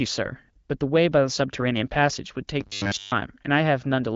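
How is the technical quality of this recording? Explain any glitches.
The recording carries one clear glitch, with light codec damage and no energy above about 7.6 kHz, consistent with an AMR-WB (HD Voice) band limit.

From 2.61 to 3.13 s the speech turns to a robotic sound, likely from repeated short buffers. A roughly 10 ms chunk loops through most of that stretch, imposing a rigid, metallic buzz at 100 Hz. On a spectrogram this shows as evenly spaced horizontal harmonic lines at 100 Hz multiples, and the waveform shows near-identical repeating cycles.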